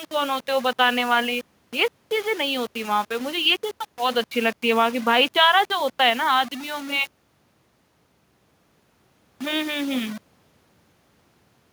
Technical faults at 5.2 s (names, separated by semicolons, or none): low bit depth without dither